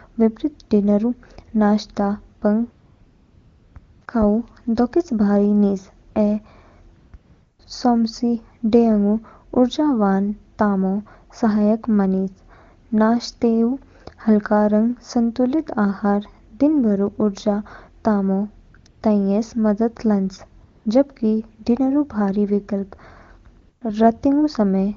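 A speech recording over a wideband phone link in which the sender's voice activity detection repeatedly judged the talker silent, stopped sending speech frames, and let the receiver substitute AMR comfort noise. This happens twelve times between 2.39 and 23.81 s: a cluster from 2.39 to 4.07 s starting right after "डिनर ऊ नाश्ते", another from 6.11 to 7.59 s ending just before "सौमसि डेयाङगु", then 18.69 to 19.01 s, 20.63 to 20.85 s and 23.61 to 23.81 s. The gaps last from 20 ms up to about 1.04 s. In each one the real background gives way to a smooth, steady synthetic hiss that switches in and out, and the coding around it sounds clean, which fits the top AMR-WB rate.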